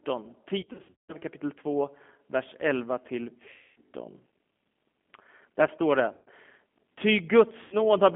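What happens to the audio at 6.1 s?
At about 6.13 s there's a dropout handled by VoIP packet loss concealment, running to roughly 6.29 s. Around 140 ms of audio went missing, which fits seven lost 20 ms packets. The decoder kept going by re-using its last pitch and vocal-tract filter and turning the gain down frame by frame, so the sound smears into a buzzy tone or coloured noise that fades. Because each frame builds on the one before, it stays weak and a bit mangled for a moment even after real packets come back.

All of that sits on top of the G.729 codec damage that runs through the whole clip. That's G.729A at 8 kbit/s, which rebuilds the speech from a filter, a pitch predictor and a few pulses per frame. With the line band at 200 Hz to 3.4 kHz, the speech comes across rough and slightly synthetic, and the damage is plainly audible.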